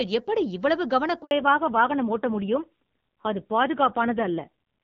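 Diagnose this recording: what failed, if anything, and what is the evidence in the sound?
Network stage: a handover gap cuts the speech to silence from 1.23 to 1.31 s, about 80 ms. Its quick fade into silence and clean restart distinguish it from concealed packet loss, which would smear or repeat sound.

Codec stage: fallback to narrowband begins at 1.31 s, right after the gap. Clear wideband HD Voice gives way to nothing above 4 kHz until the end, and the sound turns rougher, which fits a low-rate narrowband mode rather than a simple low-pass filter.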